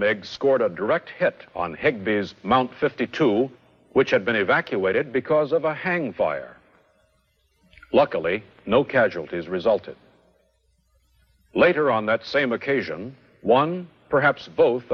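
Nothing here catches the ear as a fault; the sound runs along steadily with no glitches, dropouts or odd artefacts to point to.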